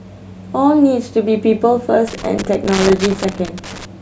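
A worn or dirty contact in the signal path kept making and breaking from 2.07 to 3.85 s, chopping the speech into an irregular burst of loose connector crackle.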